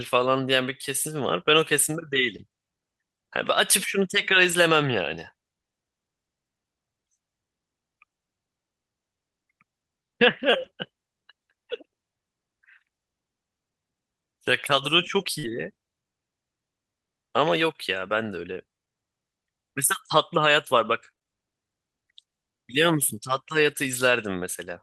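Around 4.47 to 4.53 s there's a short stretch of lost packets rebuilt from error correction. About 40 ms went missing, which fits two packets, but the following packets carried low-bitrate copies and the decoder played those, so nothing drops out. You just get a rougher, noisier patch. The same thing happens at 10.53 to 10.63 s, this time covering about 60 ms, consistent with three packets. That one is a touch longer.

At 15.39 to 15.45 s there's a short concealed packet loss. About 40 ms never arrived in time, and the receiver bridged it by stretching the last bit of sound forward for roughly 38 ms before blending back. It comes across as a brief smear or wobble. Overlapping it, from 15.43 to 15.65 s, there's another run rebuilt from error correction, about 120 ms, which fits six packets. So that whole moment goes smeared, then coarse and noisy for a couple of tenths of a second.

From 19.85 to 24.01 s there are scattered short gaps: about four tiny dropouts, none longer than around 20 ms, with roughly 70 ms patched in total. 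Each one was filled by carrying the previous sound forward. Only a couple of percent of that span is concealed, so the audio stays clear apart from a few quick ticks and hiccups dotted through it.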